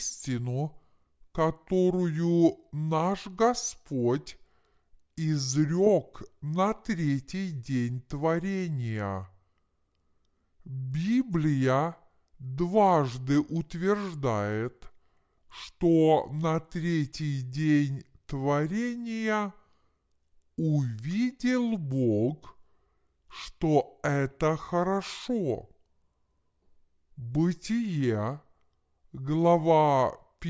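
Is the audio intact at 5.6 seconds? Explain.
No. For the whole clip, including 5.6 seconds, the wrong sample rate applies. The speech recorded at 22 kHz is being played back at 16 kHz with no conversion, so it runs at about 0.73 times its proper speed. Its pitch is roughly 5.5 semitones lower, which makes the voice sound low, slow and dragged.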